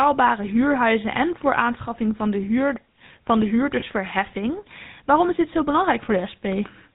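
The whole recording carries the GSM full-rate codec sound, and the damage is plainly audible. The speech has that buzzy, gravelly grain you get when the codec rebuilds the vocal tract from a coarse model and feeds it a sparse train of evenly spaced pulses instead of the real excitation. Nothing above 4 kHz gets through, so it's dull and boxy too. The character points to the 13 kbps full-rate coder.

Around 3.80 to 3.83 s there's a lost GSM frame. For that brief stretch the decoder had no good data, so it reused the last intact frame's settings. You hear a short, rough, metallic ring where the sound sticks for an instant. It's over quickly and doesn't fade out to silence. The length fits a single 20 ms frame being concealed.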